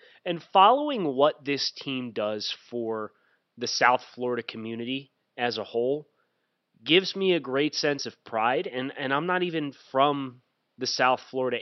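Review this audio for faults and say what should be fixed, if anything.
At 3.64 s, just after "team does for the", a corrupt frame was decoded. Flipped bits sent energy to the wrong frequencies. The result is a brief glitch peaking around -30 dBFS, which points to a couple of damaged frames. To prevent it, add integrity checks so damaged frames are concealed instead of played.

From 7.96 to 8.01 s, between "gives me a great" and "of pride", compressed frames were skipped. About 20 ms of audio is missing. To prevent it, fix the storage or transport path so that no frames are lost.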